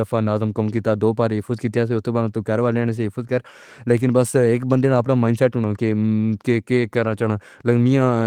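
No technical faults can be heard anywhere in the speech. It carries the light coding texture of Opus voice compression at about 20 kbps in its hybrid mode, with the band kept fullband in 20 ms frames.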